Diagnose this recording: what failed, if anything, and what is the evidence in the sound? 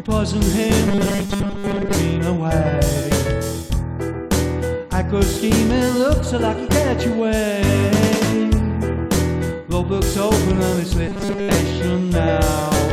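Robotic sound from repeated short buffers at 0.88–1.95 s and 11.08–11.55 s: a rigid 200 Hz buzz replaces most of the sound, likely from a driver or buffer underrun looping a 5 ms fragment. Spectrograms show evenly spaced 200 Hz harmonics; waveforms show identical repeating cycles.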